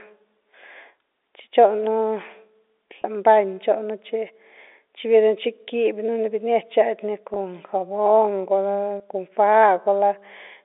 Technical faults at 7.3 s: packet loss with pitch repetition

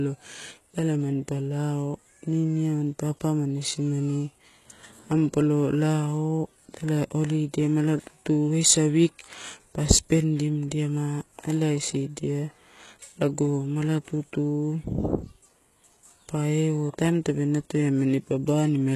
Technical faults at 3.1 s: HE-AAC compression

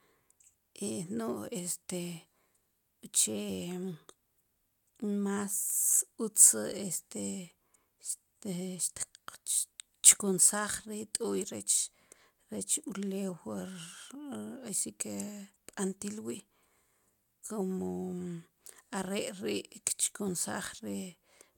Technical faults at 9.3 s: none

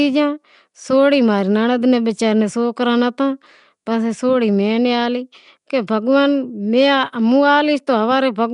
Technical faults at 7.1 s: Nellymoser compression

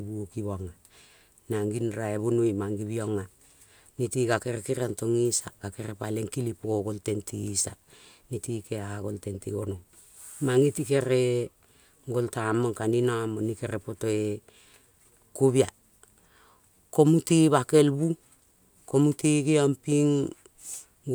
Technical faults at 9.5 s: none

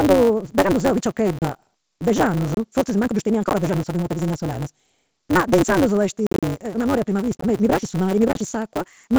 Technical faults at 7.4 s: block size mismatch (truncated); packet loss on an ADPCM call

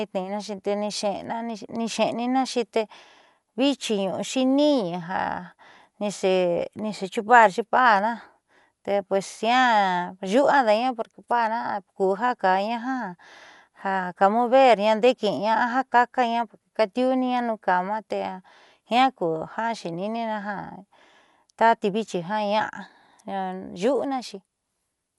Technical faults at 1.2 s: Dolby Digital compression

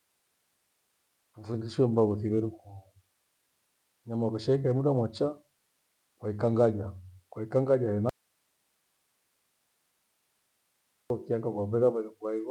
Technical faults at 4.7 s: none

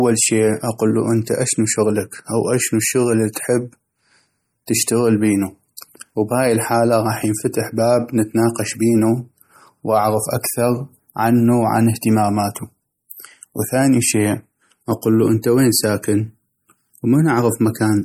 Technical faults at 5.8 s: MP3 compression; pre-echo

